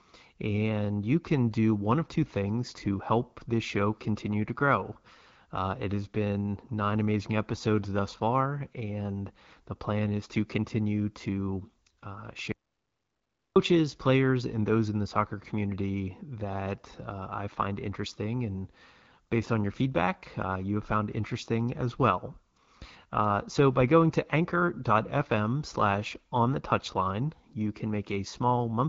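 Speech with an audio dropout to silence from 12.52 to 13.56 s: about 1.04 s drops to silence with no room tone, and whatever was said there is lost. The likely cause is a momentary loss of the input signal while recording continued. The AMR wideband (HD Voice) band limit is audible, with nothing above 7.5 kHz and the light coding texture expected of a 12.65 kbit/s mode.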